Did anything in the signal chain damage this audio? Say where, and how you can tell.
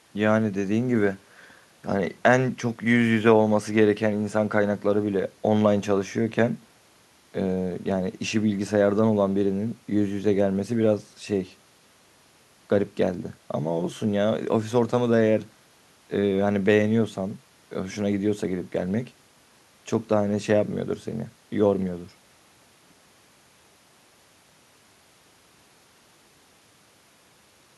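No, nothing in the signal chain audibly damaged this speech recording. No stage from capture to playback leaves a mark a listener can hear.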